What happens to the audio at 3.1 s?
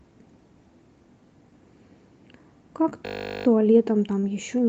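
A system hang loop starts at 3.06 s and lasts until 3.46 s. The machine stalled while the sound hardware kept replaying one 20 ms stretch of its buffer. That piece repeats 20 times, producing a steady buzz at 50 Hz.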